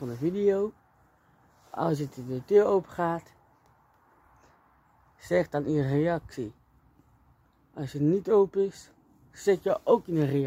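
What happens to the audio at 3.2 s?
Nothing goes wrong at 3.2 s; the audio plays through that moment intact, with no dropout, click or distortion.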